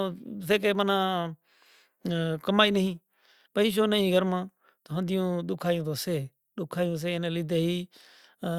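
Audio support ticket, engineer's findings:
No faults found in this speech recording.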